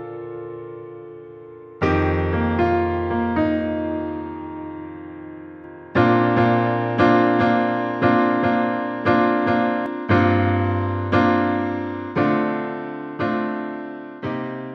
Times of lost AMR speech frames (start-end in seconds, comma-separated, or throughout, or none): none